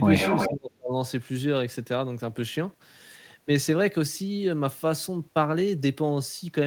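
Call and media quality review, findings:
Echo leak, 0.17–0.52 s. Delayed copy of the speech, 355 ms behind, only slightly quieter than the original. Likely far-end loudspeaker pickup the echo canceller failed to remove. Residual sent back into the call.

Speech suppressed in double talk, 0.48–0.96 s. Speech drops sharply, about 35 dB at its deepest, for about half a second. Likely echo canceller unable to separate near-end talker from loudspeaker echo. Attenuated both together.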